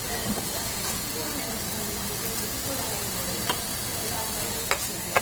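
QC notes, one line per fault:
Throughout: Opus compression, plainly audible. Bandwidth stays full up to 20.2 kHz, but tonal parts turn grainy, rough and noisy rather than swirly, which fits a likely cause of CELT-mode Opus near 16 kbps filling bit-starved bands with folded spectrum or noise.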